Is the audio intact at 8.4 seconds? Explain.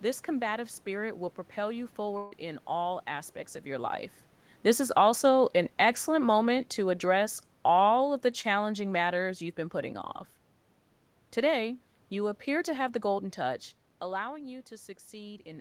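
No. From 8.41 to 8.45 s there is a brief smear or wobble, a short concealed packet loss. About 20 ms of the call reached the decoder too late, and the receiver filled the gap by extending the preceding sound, either from its pitch or as shaped noise, before blending back into the real audio.

The moment also falls inside automatic gain falling, which runs from 4.81 to 9.28 s. The sound and its background sink together by about 7 dB, because the gain control judged the input too loud or its background noise too strong and lowered its gain.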